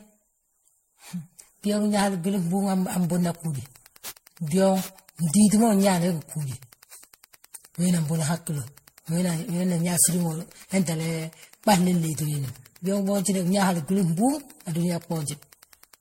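From the start, the speech has a swirling, hollow, smeared texture with blurred consonant attacks and nothing above 16.5 kHz. This generation loss most likely comes from repeated MP3 decoding and re-encoding, perhaps ten passes, at what sounds like about 64 kbit/s, with quantisation noise and spectral holes building up.

At 2.94 s, Wi-Fi interference begins and continues to the end: a steady tick every 102.4 ms, roughly ten per second, sitting about 30 dB below the speech. A nearby Wi-Fi radio's beacon bursts are being rectified by the audio circuitry.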